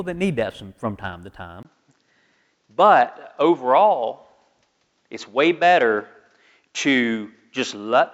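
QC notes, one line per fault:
1.63–8.13 s, input switched to a poorer device: right after "from from time to", a 20 ms gap, then nothing above 7.6 kHz. The spectrogram shows a flat ceiling and the waveform a brief dropout. Level stays about the same, and a new noise floor sits roughly 50 dB below the speech. This is likely a switch to a narrower-band input.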